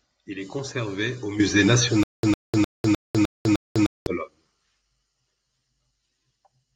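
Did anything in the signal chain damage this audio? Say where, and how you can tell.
Yes. After "est conservé au musée", from 2.03 to 4.07 s, a 105 ms burst repeats six times, each followed by 200 ms of digital silence. This is stutter with silent gaps, likely a stalled playback buffer replaying its last fragment while the audio that should have played is lost.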